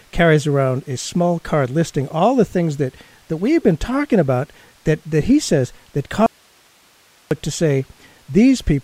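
At 6.26 s, right after "that he says that", the speech drops out to a faint residue for just over a second, returning at 7.31 s with "to say". The gap holds only a low hiss, roughly 35 dB below the speech. The likely cause is a brief loss of the wanted signal while the path downstream stayed live. What separates it from a natural pause or fade is the abrupt cut at both edges and the steady hiss filling the gap.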